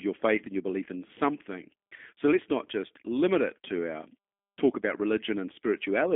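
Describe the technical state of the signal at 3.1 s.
G.729 codec coloration is present at 3.1 s, as it is across the whole clip. The speech is rebuilt from a vocal tract filter, a pitch predictor and a few pulses per 10 ms frame, at a rate that fits 8 kbit/s. The band is held to a telephone line of 300 Hz to 3.5 kHz, with nothing above 3.5 kHz. The damage is plainly audible: the speech is intelligible but rough, thin and synthetic.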